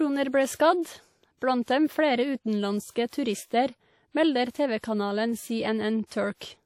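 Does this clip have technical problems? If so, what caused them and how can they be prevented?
Yes. The whole clip has plainly audible WMA compression, likely from a low-rate encode. The long transform blocks smear quantisation noise into a ringing, washy hiss that breathes with the speech, and nothing survives above 17.7 kHz, which fits roughly 48 kbps. Keeping an uncompressed master or encoding at a higher bitrate prevents this.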